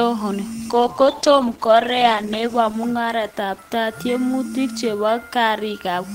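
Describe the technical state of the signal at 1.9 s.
At 1.9 s the speech sits inside a call bitrate drop that runs from 0.74 to 4.89 s. The encoder's budget falls from 48 to 13 kbps and stays at its lowest for about 1.6 s, so the codec spends far fewer bits per frame, quantises the spectrum coarsely and removes the upper frequencies. The speech turns muffled and watery. Unlike a fixed band-limit, the dull, swirly quality is confined to this window and lifts as the bitrate recovers.

Under that, and present across the whole clip, is a grainy distortion that fits low bit depth without dither, likely an 8-bit truncation. With no dither, the rounding error tracks the waveform, leaving a gritty residue roughly 30 dB below the signal that rises and falls with the speech rather than sitting as a steady hiss. It gets harsher on quiet syllables and tails, and unlike the codec damage it does not change at 0.74 or 4.89 s.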